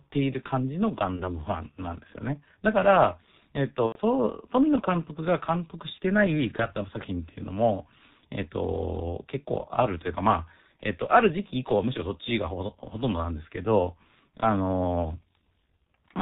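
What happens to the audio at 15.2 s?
At 15.2 s the audio carries the same heavy G.723.1 codec damage present throughout the clip. Nothing above 4 kHz survives, and 30 ms frames with a slowly updated voice model leave the speech muffled and hoarse with smeared consonants, consistent with roughly 6 kbit/s.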